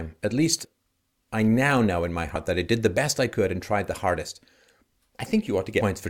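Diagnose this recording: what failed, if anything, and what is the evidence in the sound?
The fault is in the codec decode stage: compressed frames skipped. The speech jumps forward abruptly at 0.64 s, at 2.35 s between "now know in my" and "that I did the", and at 5.8 s. The first two jumps drop around 70 ms of speech, the last around 150 ms. That fits whole 21.3 ms frames going missing, a few at a time. The decoder never played those frames.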